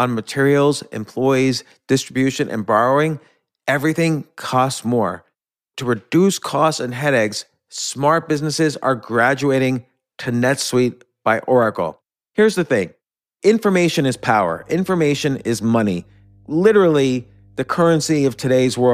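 A ground loop or nearby transformer couples the 50 Hz power line into the signal from 14.16 s, just after "the thing information is", until the end. The result is mains hum: a steady low drone, roughly 30 dB below the speech, beneath everything that follows.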